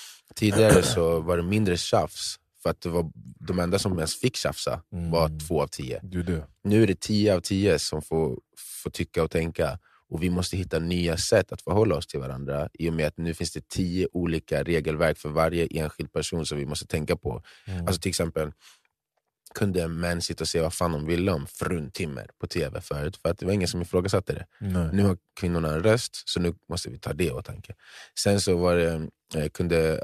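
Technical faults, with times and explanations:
No technical faults can be heard in this recording.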